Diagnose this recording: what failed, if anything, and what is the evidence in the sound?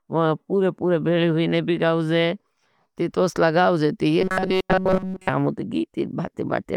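Robotic sound from repeated short buffers, 4.21 to 5.29 s. Speech becomes a rigid 188 Hz buzz, likely a starved driver buffer looping about 5 ms.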